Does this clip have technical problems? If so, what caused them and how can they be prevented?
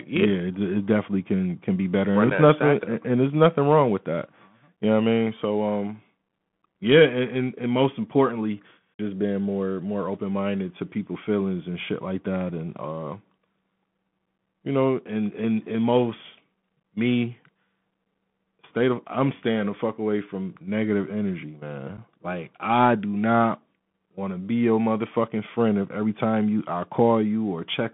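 Yes. The clip has two problems: a narrowband Bluetooth CVSD headset codec across the whole clip, and two brief unconcealed Bluetooth headset packet losses.

The Bluetooth CVSD headset codec limits the audio to roughly 150 Hz to 3.5 kHz, so the speech sounds thin and boxed-in. CVSD encodes each sample as a single up-or-down bit and adapts its step size. Fast, loud changes outrun that step, which leaves a plainly audible granular, gritty texture on the speech. The sound fits a 64 kbps CVSD link. Prevention: negotiate a wideband headset mode such as mSBC or LC3, or record through a wired microphone.

Unconcealed Bluetooth headset packet loss leaves two short holes, at 2.30 s and at 21.97 s. The second comes just after "away from negative energy". Each gap is about 7.5 ms, which matches a single lost voice packet between headset and phone. Nothing was interpolated over the missing audio, so silence or an idle pattern fills it, and the edges cut in and out abruptly. 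Prevention: reduce radio interference and distance, and enable packet-loss concealment in the receiving stack.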